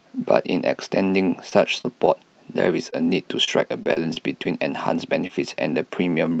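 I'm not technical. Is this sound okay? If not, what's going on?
No, not quite. It's speech that went over an internet call, and a few pieces got lost on the way.

Short concealed packet loss happens around 1.49, 1.81, 2.90 and 5.27 seconds. Each time, about 20 milliseconds of audio never arrived. The receiver covered the hole by stretching the last bit of sound, so you hear a quick smear or wobble.

Repeated packet loss (robotic sound) runs from about 3.44 to 4.47 seconds. There are five small gaps in quick succession, none longer than 30 milliseconds. Because each one gets patched the same way, the speech turns choppy there.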